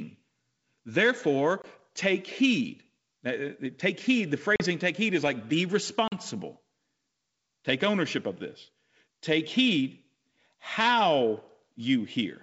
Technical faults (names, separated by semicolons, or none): packet loss on an ADPCM call